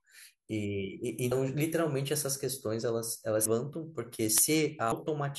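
Speech, with compressed frames skipped in three places: at 1.31 s, 3.45 s and 4.91 s the audio lurches forward. The first and last jumps lose roughly a tenth of a second each, which is about four frames. The middle one drops around 300 ms, about fifteen frames. The skip sizes fit a frame length near 26 ms. Those frames were either missing or rejected by the decoder.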